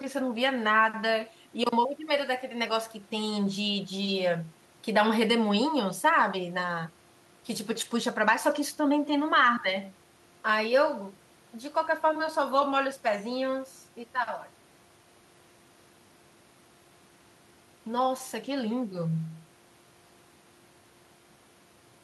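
Nothing stood out as a technical fault on listening to this speech recording.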